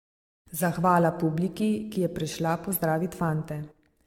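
From start to finish the speech carries generation loss: a swirly, hollow smear with blurred consonant attacks and nothing above 17 kHz. It's likely from around seven passes through a lossy codec, consistent with AAC-LC at 96 kbit/s, each re-encode stacking fresh quantisation damage.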